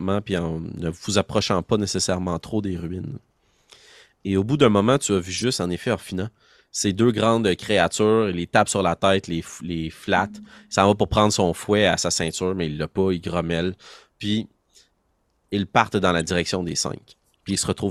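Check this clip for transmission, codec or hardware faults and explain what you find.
The clip has one kind of fault: corrupt frame decoded, occurring four times.

Flipped bits in compressed frames were decoded and played anyway, so misread gains and codes placed energy at wrong frequencies for a few frames. The result is short chirps and noise blips:

5.38–5.44 s, between "moment tu as vu" and "en effet", fairly loud.
10.45–10.47 s, very faint.
16.2 s, between "ils partent dans la" and "direction des", moderate.
17.49–17.6 s, the longest and loudest, spanning several frames.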